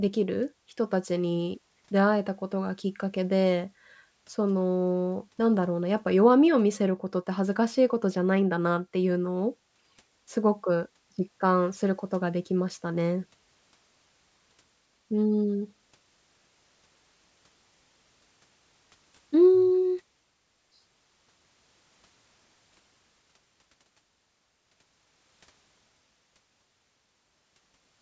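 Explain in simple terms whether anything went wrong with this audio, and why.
Something went wrong, from start to finish. The speech has aliasing. Hissy sounds like s and sh turn gritty and metallic. The sample rate was lowered without first removing the highest sounds, so they folded back below 8 kHz as false tones.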